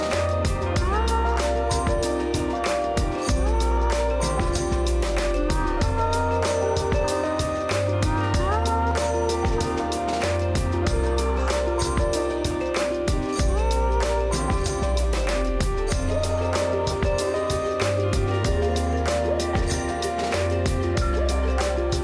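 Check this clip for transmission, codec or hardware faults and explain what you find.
No faults can be heard anywhere in the clip. Nothing in the audio needs further comment on how it was carried or captured.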